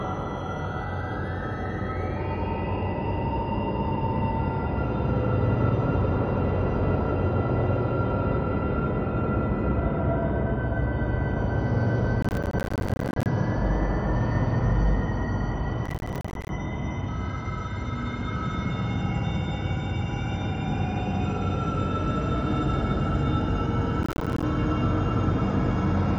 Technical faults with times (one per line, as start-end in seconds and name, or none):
12.22-13.26 processor overload crackle
15.86-16.49 processor overload crackle
24.03-24.43 processor overload crackle